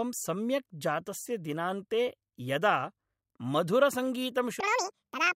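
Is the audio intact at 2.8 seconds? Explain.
Yes, at 2.8 seconds the audio is intact, with no dropout, click, distortion or other fault in the speech at that point.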